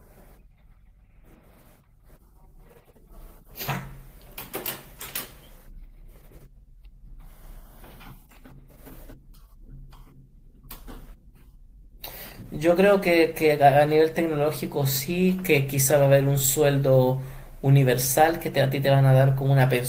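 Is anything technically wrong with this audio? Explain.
No, nothing technically wrong stood out on listening to this speech recording.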